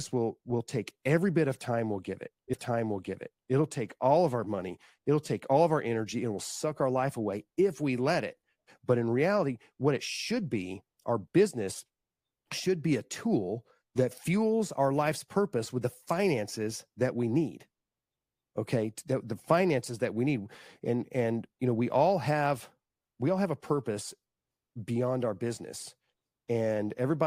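The player queued the same stream segment twice, a stream segment repeated fault, so at 2.53 s the programme jumps back and replays one second of speech that was already heard, running to 3.53 s. It comes right after "time we'll give it", and a small blip marks the jump back. The restatement ends and the speech carries on with "take all of our", making the clip one second longer than the original.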